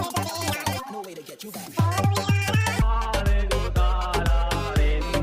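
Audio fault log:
0.00–2.82 s, audio read two samples at a time (double speed): the reader consumed each pair of samples as a single frame, as if the stream had two channels or twice-wide samples, so the sound plays at 2× speed, an octave higher.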